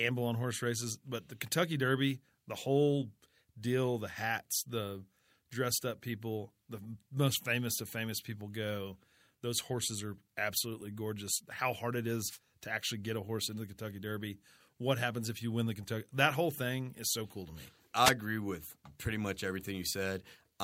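Speech, and you'll hear a wireless microphone noise hit twice: a short burst of static from 12.27 to 12.39 s, right after "hard it" and before "to actually get a", and another from 18.03 to 18.12 s, between "so cool to me" and "agree with pretty much". Both bursts are about a tenth of a second. That's the FM radio link fading as reflections cancel out, so the receiver noise rises and covers the voice.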